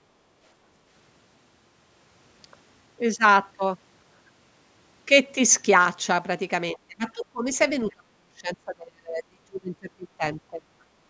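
From 6.73 to 7.51 s, the echo canceller likely mistook simultaneous talk for loudspeaker echo and turned the talker down, a case of speech suppressed in double talk. The speech dips by around 30 dB. At 7.61–7.65 s, a brief scrap of the other side's voice leaks through, likely echo the canceller failed to remove, faint at roughly 30 dB below the speech. From 7.94 to 10.66 s, the double-talk suppression likely returns, leaving the speech attenuated for about two seconds.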